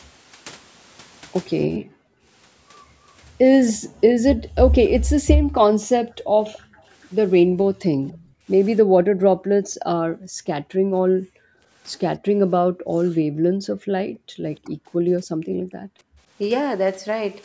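At 0.33–0.37 s the speech briefly dips by a few decibels, likely speech suppressed in double talk, a short notch in the waveform envelope. At 1.79–2.26 s the background is gated by the echo canceller, falling about 40 dB to near-blank spectrogram gaps. At 3.68–3.73 s a faint copy arrives 286 ms late, likely echo leak, a weak repeated smear. From 3.78 to 16.18 s the same gating keeps muting the room in intermittent blanks. Further double-talk dips follow at 5.8–5.86 s, 7.79–8.84 s (up to about 30 dB) and 14.64–14.72 s. Echo leak recurs at 6.44–8.3 s as ghost traces about 25 dB down.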